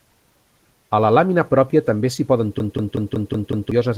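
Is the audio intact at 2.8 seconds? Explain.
No. At 2.8 seconds the clip is inside a system hang loop running from 2.60 to 3.72 s. The driver stalled while the playback hardware kept replaying its ring buffer, so a 186 ms slice of speech repeats six times at about 5.4 Hz, which fits an 8192-sample buffer. It sounds like a rhythmic machine-gun stutter, and roughly a second of real audio is lost. Unlike codec packet-loss concealment, which smears and fades, these repeats are identical copies.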